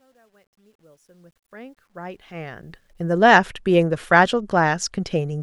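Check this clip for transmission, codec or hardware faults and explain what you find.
One fault is present: truncation distortion on a fade. From the start to 3.26 s the fade-in was processed at too short a word length, which fits roughly 11 bits, with no dither added. Near the bottom of the fade the waveform collapses onto a handful of coarse square steps. Over the first 1.78 s, the quietest stretch, the speech sounds gritty. It grows cleaner as the level rises toward 3.26 s, where the fade-in completes.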